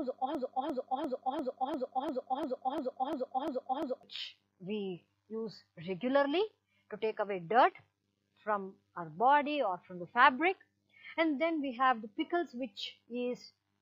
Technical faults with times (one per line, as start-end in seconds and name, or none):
0.00-4.03 broken-record loop